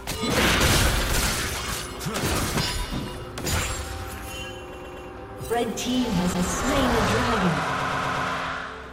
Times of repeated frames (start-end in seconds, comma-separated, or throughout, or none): 4.72-5.08, 6.33-6.47, 7.79-8.27